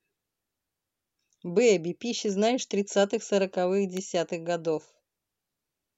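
A speech recording carrying one electrical switching spike at 3.97 s, a single sharp snap peaking around −20 dBFS that sits on top of the speech rather than interrupting it, unlike a dropout click. It is most likely a nearby switch or static discharge arcing into the audio line.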